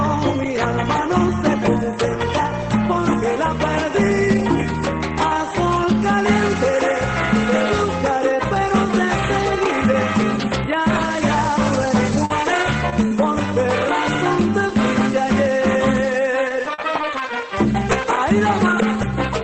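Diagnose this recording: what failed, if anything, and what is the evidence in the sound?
Packets were lost or arrived too late on the network leg, leaving scattered short gaps. The receiver's concealment covered each hole by extending the last decoded sound. Between 11.73 and 13.13 s there are about three brief ticks or smears, and between 16.31 and 17.21 s about four more. The longest lasts around 40 ms. The sound stays clear through both stretches but hiccups at each patched spot, above a codec-limited top end that points to Opus running near 24 kbps with content up to 8 kHz.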